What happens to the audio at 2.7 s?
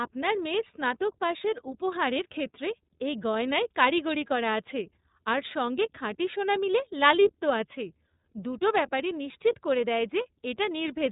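At 2.7 s the speech carries the same iLBC codec damage heard throughout the clip. Nothing above about 3.8 kHz gets through, and each 30 ms frame has its excitation coded on its own, which fits the 13.33 kbps mode. The result is plainly rough, slightly synthetic speech. Simple telephone band-limiting would dull the sound without that rough, synthetic texture, and packet loss would cause brief gaps rather than constant roughness.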